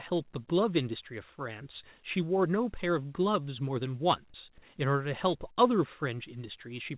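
At 5.52 s to 5.58 s there is a short concealed packet loss: about 40 ms of the speech never arrived in time, and the receiver covered the gap by extending the preceding sound before crossfading back. It comes across as a brief smeared wobble. On a spectrogram, the narrowband call path leaves nothing above 4 kHz.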